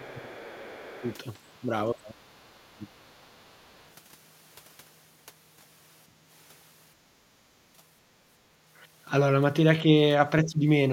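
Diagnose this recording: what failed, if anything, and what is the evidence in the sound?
Call processing failed at the echo-cancellation stage. The other side's voice leaks through faintly at 0.0–0.29 s, 0.8–1.15 s and 3.17–3.9 s, roughly 25 to 40 dB below the talker. The likely cause is loudspeaker playback reaching the microphone and surviving incomplete echo cancellation.

Speech suppressed in double talk, also in call processing, appears at 0.0–1.06 s, 1.93–2.98 s and 10.44–10.66 s. The talker's level dips by about 15 dB, and by about 25 dB at the deepest. This is likely the canceller attenuating everything while both sides spoke at once.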